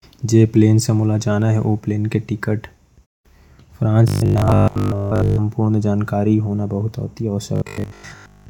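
From 4.08 to 5.38 s, just before "पूरा जानकारी होना", the speech turns into a rigid, metallic buzz pitched at 50 Hz. This is robotic sound from repeated short buffers. The likely cause is audio arriving too seldom. The player keeps looping the last chunk, and a 50 Hz buzz fits a 20 ms repeat. Most of the real sound is skipped, so the speech only roughly survives. The same buzz returns from 7.56 s to the end.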